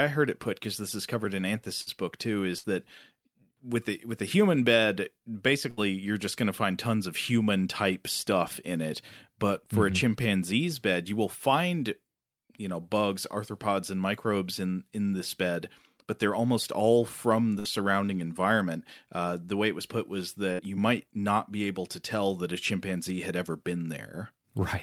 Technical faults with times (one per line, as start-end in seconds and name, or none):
1.81-1.89 burst of packet loss
2.58-2.67 burst of packet loss
5.70-5.80 burst of packet loss
17.59-17.68 burst of packet loss
20.53-20.62 burst of packet loss